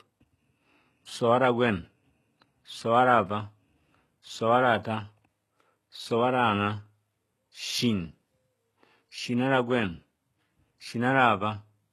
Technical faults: HE-AAC compression

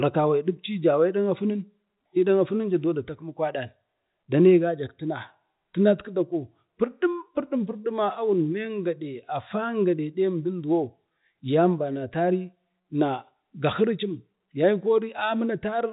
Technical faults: none

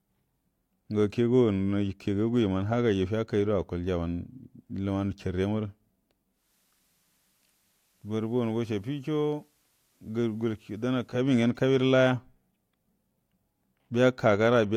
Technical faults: digital radio blending to analogue

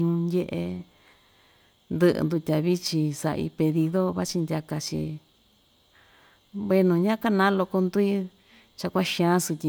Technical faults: none

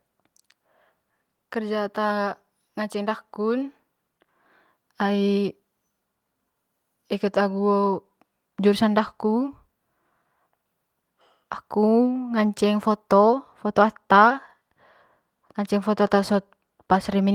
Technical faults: channel delay (comb filtering)

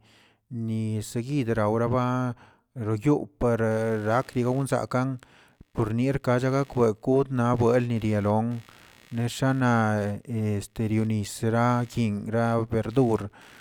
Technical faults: computer activity noise

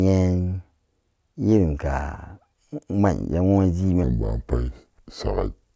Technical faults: wrong sample rate

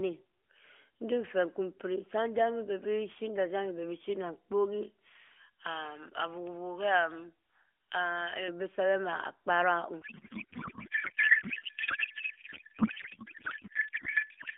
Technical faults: pre-emphasis left on; codec payload misread

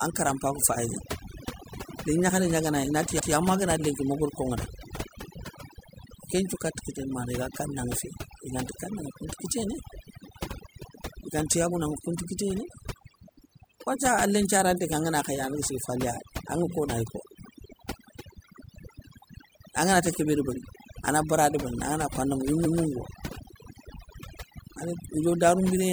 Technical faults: overdone noise removal; repeated frames

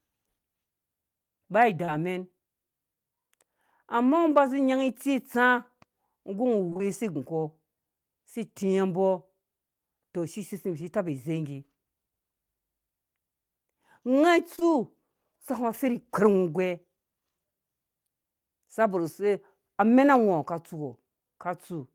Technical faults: short concealed packet loss

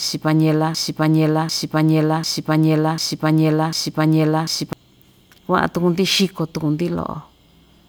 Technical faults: broken-record loop

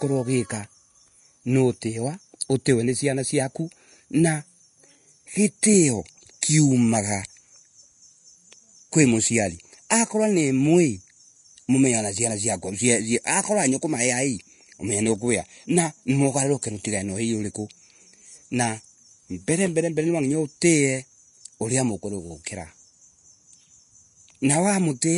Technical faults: Vorbis compression

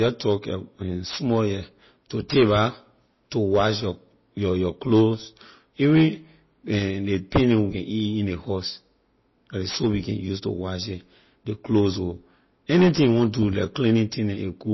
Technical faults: MP3 compression

